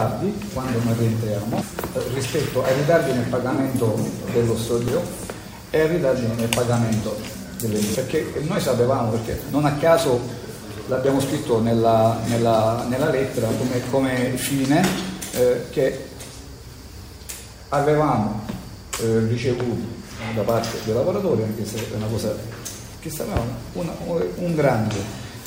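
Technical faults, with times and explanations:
1.62–1.65 s, 4.88–4.91 s and 7.95–7.98 s: damaged data in a compressed stream. Each is a brief glitch of about 30 ms. Corrupt bytes make the decoder misread those frames and lose sync, so it outputs garbled sound until it finds the next valid frame header.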